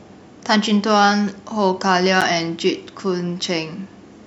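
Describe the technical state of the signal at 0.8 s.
At 0.8 s the speech signal is intact, with no audible fault at that moment.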